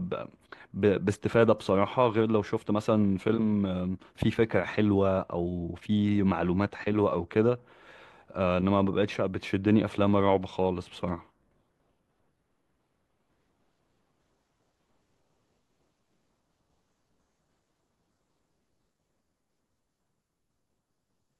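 Nothing in the speech stood out as a technical problem on listening.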